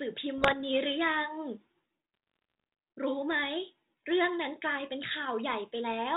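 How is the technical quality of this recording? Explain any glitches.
The recording has two patches of bit errors on an ADPCM link. The underlying narrowband sound fits a 32 kbit/s G.726 path with only light coding roughness.

From 0.38 to 0.55 s, and again from 2.14 to 2.73 s, you get pops and gritty bursts with quick level jumps. Flipped bits throw off the decoder's predictor and step size, so each error rings on for a few milliseconds. The first patch is denser, around 1% of bits, and the longer second one is lighter, under half a percent.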